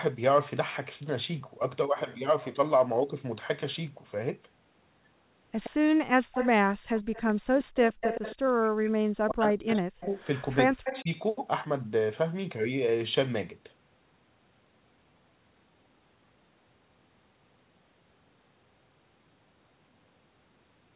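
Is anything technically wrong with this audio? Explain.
Yes. Between about 5.6 and 11.1 s the speech has two faults.

Echo leak at 5.63–5.70, 6.33–6.50, 6.98–8.52, 9.67–10.45 and 10.85–11.02 s: the far end's echo canceller likely failed to remove its loudspeaker pickup. A copy of the speech returns 117 ms late, about 5 to 15 dB below the direct voice, as a trailing double.

Speech suppressed in double talk at 8.50–10.11 and 10.69–11.10 s: with both sides talking at once, the echo canceller likely could not separate the talker from the echo and attenuated everything. The voice drops by up to roughly 40 dB.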